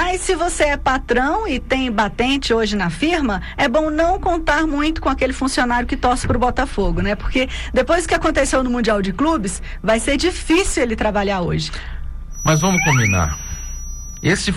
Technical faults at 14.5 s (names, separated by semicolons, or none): feedback whistle